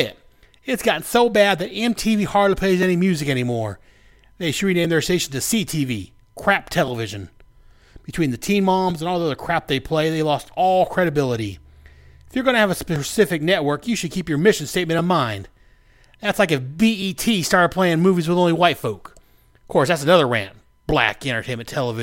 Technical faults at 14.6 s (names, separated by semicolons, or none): clock drift buffer slips